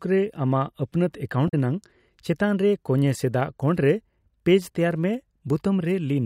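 From 1.45 to 1.54 s the speech breaks into a brief glitch caused by damaged data in a compressed stream. The decoder misreads corrupted frames and loses sync until the next valid frame header.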